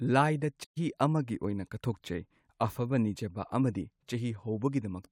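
At 0.64 s the speech halts mid-flow and the output falls silent for about 120 ms, until 0.78 s, when it resumes with "ꯑꯃꯒꯤ ꯑꯣꯏꯅ". This is a playback stall, likely from the player running short of data or its thread being blocked. It differs from a dropout because the gap is a clean pause in the output while the player waits, after which the speech carries on.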